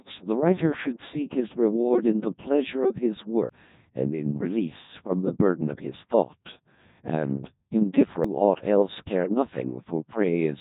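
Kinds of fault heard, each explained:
Codec 2 vocoder: This low-rate digital-radio vocoder sends only pitch, voicing, loudness and a rough spectral shape, and the decoder rebuilds the speech from sine waves. The original waveform is never kept. Here the damage is heavy throughout. The speech sounds robotic and buzzy, with a synthetic, smeared quality that fits a rate near 1.2 kbit/s. Nothing is present above 3.8 kHz, so the top end is dull and closed in.
Audio missing between chunks: The speech skips forward abruptly at 3.49 s and again at 8.24 s. At each point, roughly a third of a second of sound is gone, and the two sides are butted together with no silence between them. The likely cause is a recorder or processor that works in blocks of about 5 seconds and drops a short stretch while closing one block and opening the next.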